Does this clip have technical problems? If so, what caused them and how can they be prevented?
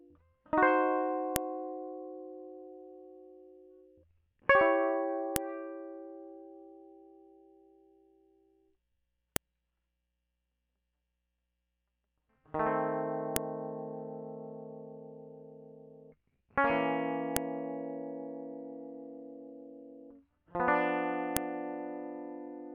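Yes: sharp, loud clicks at 1.36, 5.36, 9.36, 13.36, 17.37 and 21.37 s, every 4 s, are file headers played as audio, left in when music pieces were joined. Strip each piece's header before concatenating or streaming the raw samples.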